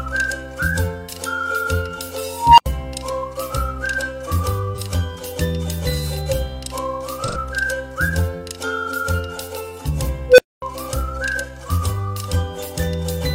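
At 2.27 s an unstable filter sets in. A recursive filter with bad coefficients feeds its output back with gain above unity, so a tone around 1 kHz swells over about 313 ms, clips, and overflows. The sound then drops out for 80 ms until the filter resets, ending at 2.66 s.

At 4.74 s, AAC frame loss with concealment leaves a brief smeared, phasey patch of about 43 ms, which fits a single lost frame. The decoder rebuilds the gap from the previous good spectrum with scrambled signs or interpolated energy. At 7.24 s a longer gap of about 85 ms, consistent with two consecutive frames, gets the same treatment and runs to 7.37 s.

At 10.29 s the unstable filter recurs, this time as a lower tone around 500 Hz. It grows much faster, reaching overload in about 97 ms, then falls silent for 240 ms before the reset. The event ends at 10.62 s.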